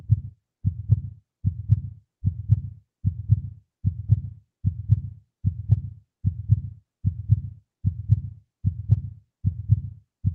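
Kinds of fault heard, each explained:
No faults can be heard in this clip. It has passed through a WebRTC call path, and the audio stays within a band that tops out around 12 kHz, which fits an Opus codec running at a moderate bitrate of roughly 40 kbps.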